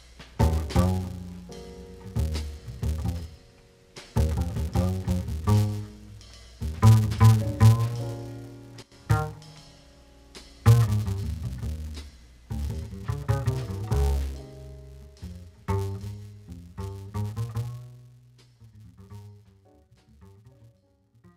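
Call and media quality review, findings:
Filter restarted on every block, whole clip: steady 200 Hz buzz riding on the sound, which fits a 5 ms processing block. A filter stage drops its state at each block boundary and restarts from silence, leaving a small transient every block. The buzz rises and falls with signal level, which separates it from mains hum or a fixed tone.

Sudden gain jump, 8.82 to 8.92 s: level drops by about 12 dB in a single step, then returns. Sound and background noise fall together, pointing to a gain setting or bit shift in the digital path applied without a ramp, likely the cause. The step is instant, unlike compressor or AGC action, which moves the level gradually.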